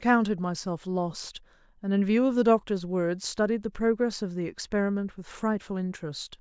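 No technical faults can be heard anywhere in this recording, and the signal holds steady throughout.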